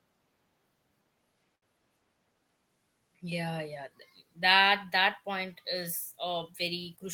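From 1.55 to 1.74 s, a short stall from a late packet stretches the held sound by 68 ms with a slight buzz or dip; unlike packet loss, nothing is skipped afterwards.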